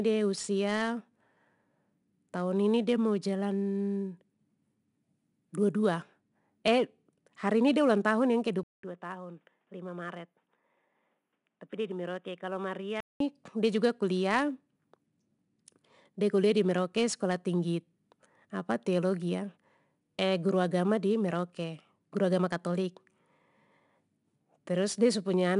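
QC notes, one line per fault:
throughout: 4-bit ADPCM compression. Each sample is coded as a coarse 4-bit step from a prediction, so a gritty hiss rides on every loud syllable and sharp onsets smear. A spectrogram shows broadband noise tracking the speech level and nothing above 10.6 kHz, consistent with roughly 89 kbps.
8.63–13.20 s: input switched to a poorer device. The sound drops out for about 200 ms, then returns duller, about 10 dB quieter, and cut off above 3.8 kHz, likely a change to a headset call profile. A new noise floor roughly 50 dB below the speech appears. The waveform shows a gap and a smaller envelope, and the spectrogram a hard ceiling until the fuller band resumes.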